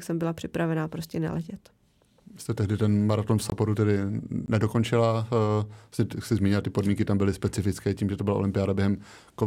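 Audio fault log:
3.50–3.52 s and 4.46–4.48 s, block of digital silence: twice the speech drops to silence for 20 ms and then resumes, with no fade at either end. The output buffer was likely not filled in time, so zeros were played. The abrupt jumps to and from silence are heard as a brief hole. A waveform shows a flat line, and a spectrogram shows a thin blank column.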